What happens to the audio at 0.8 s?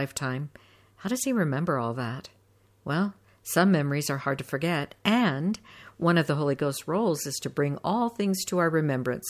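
Nothing goes wrong at 0.8 s: the speech continues intact, with no dropout, click or distortion at that point.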